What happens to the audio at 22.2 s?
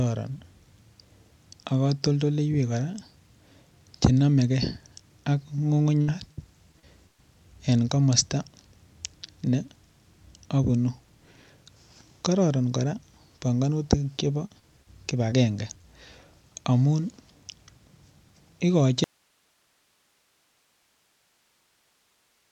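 At 22.2 s the speech is gone in an audio dropout to a faint residue, which began abruptly at 19.04 s and lasts to the end. Only hiss remains, roughly 45 dB down, likely because the signal was lost while the path stayed live. It is not a pause or fade.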